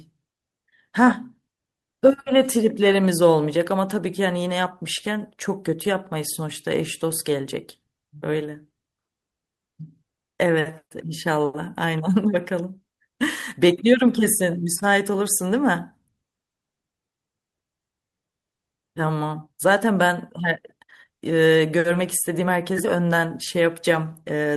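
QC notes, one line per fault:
Nothing to flag on this speech clip; I listened all the way through and didn't hear a single problem worth a line.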